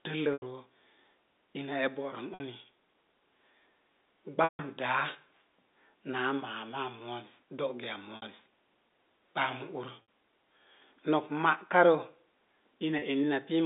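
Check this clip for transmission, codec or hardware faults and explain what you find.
Six short packet losses with pitch repetition break up the speech, at 0.33, 2.34, 4.44, 8.16, 10.02 and 12.99 s, lasting about 90, 60, 150, 60, 60 and 30 ms. The receiver fills each gap by looping the last pitch period, so the shorter ones sound like a briefly held, buzzy tone. The 150 ms loss at 4.44 s fades toward silence before speech cross-fades back. A plain dropout would leave a clean hole instead. The G.711 telephone band, roughly 250 Hz to 3.7 kHz, frames all of this.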